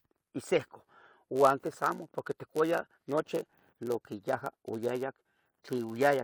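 From 1.35 s to the end, the speech carries a steady buzz near 100 Hz, a block size mismatch (padded): each block arrives slightly short and is topped up with silence, slowing playback to 0.996 speed. Timbre stays put, unlike a sample-rate error.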